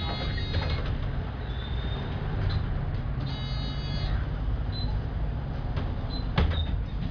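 No audible technical faults in this recording of sounds; nothing to flag.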